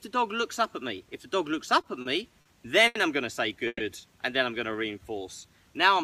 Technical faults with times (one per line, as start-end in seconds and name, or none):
1.81-2.08 short stall from a late packet
2.41-2.48 short stall from a late packet
2.87-2.98 short stall from a late packet
3.67-3.83 call audio freeze
4.72-5.20 jitter buffer slow-down